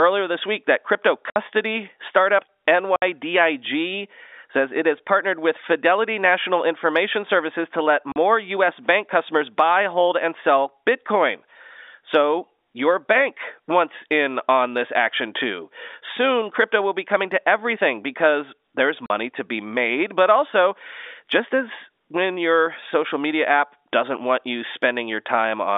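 Packets went missing and the receiver filled the gaps with silence (packet loss filled with silence), cutting hard-edged holes into the speech at 1.30 s after "this week that crypto", at 2.96 s, at 8.12 s after "to let", and at 19.06 s before "to be made but". The first two gaps last 60 ms and the last two 40 ms, which fits whole 20 ms packets dropping out. The narrow telephone band of the G.711 line stays audible around them.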